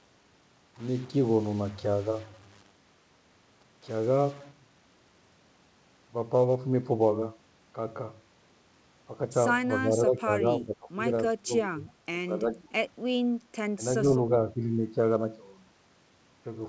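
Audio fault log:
0.00–4.51 s: stuck bit. Grainy or harsh, buzzy distortion, likely from one data bit frozen at a fixed value. The waveform shows step offsets, and the spectrogram shows broadband noise filling the pauses.
9.85–10.98 s, 11.43–12.73 s, 13.77–14.06 s, 14.53–14.60 s: speech suppressed in double talk. The voice dips by up to about 20 dB, likely because the echo canceller clamped down while both sides spoke. These show as abrupt envelope notches in the waveform and faded energy bands in the spectrogram.
12.51–12.63 s: echo leak. A faint copy of the voice returns 331 ms late, about 30 dB below it, likely residual loudspeaker echo. It appears as a weak, time-shifted repeat of the speech pattern in the spectrogram.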